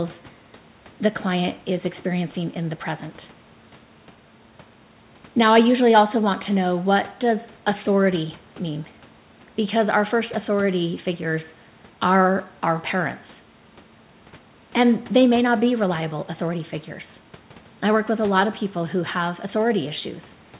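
No technical faults are audible.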